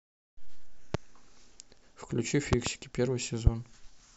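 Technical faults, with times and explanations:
0.94–0.97 s, 2.53–2.69 s and 3.47–3.49 s, loud pop: single sharp pops at the first and last times and a quick double pop at 2.53 s, peaking some 20 to 25 dB above the speech. These are likely sudden voltage steps from a plug, switch, static or driver glitch, shaped into thumps over the continuing speech.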